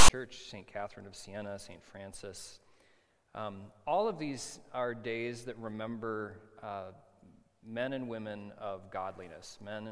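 A harsh, one-sided rasp followed by a brief dead gap opens the audio from 0 to 0.10 s: file tags played as audio, with text metadata and zero padding decoded as samples.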